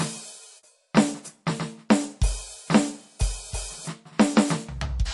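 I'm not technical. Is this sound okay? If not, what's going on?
No. MP3 compression damage runs throughout. The likely cause is heavy squeezing that discards everything above 11.3 kHz, leaving the music dull, watery and swirly.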